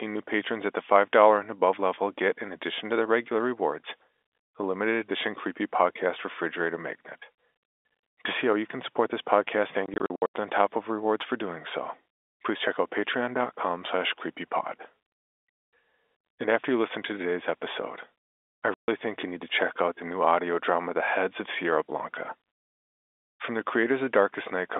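Packet loss filled with silence hits at 9.86 to 10.32 s, after "can support this podcast": about 240 ms of gaps scattered across 480 ms, runs up to 80 ms, fitting 20 ms packets, with hard edges. A single 140 ms hole follows at 18.74 s, before "think you need to".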